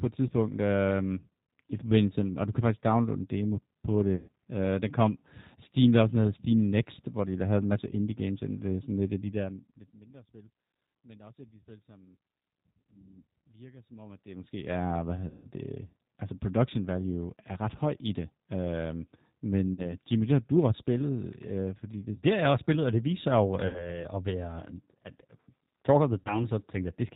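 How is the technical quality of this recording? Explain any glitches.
The quality is limited by a narrowband voice codec, with five short dropouts.

The speech runs through the G.729 codec at 8 kbit/s. Because it rebuilds the voice from a filter and pulses and cuts everything above 4 kHz, it sounds rough, synthetic and muffled throughout.

VoIP packet loss concealed by the speech codec happens at 4.16–4.28 s, 15.28–15.47 s, 19.74–19.95 s, 23.67–24.02 s and 26.20–26.44 s, with 40 to 160 ms lost each time. The decoder extends the last sound into a fading buzz, and the speech stays weak just after each gap.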